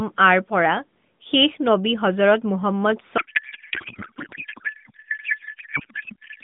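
From 3.18 s to the end of the clip the speech gives way to a codec payload misread: frames packed in AMR's octet-aligned layout are being parsed as bandwidth-efficient, so every field lands in the wrong bits. The decoder still synthesises something, a garbled, warbling noise that barely tracks the talker. On a spectrogram the formant and harmonic structure vanishes into smeared broadband energy, still capped near 3.6 kHz by the narrowband path, and the waveform envelope stops following syllables.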